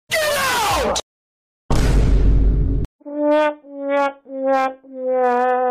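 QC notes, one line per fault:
3.31–3.48 s, 3.97–4.06 s, 4.53–4.67 s, 5.24–5.52 s: hard clipping. Peaks overdriven by about 2 dB (about 1 dB in the last) are cut flat, so brief crackle rides on the loud moments.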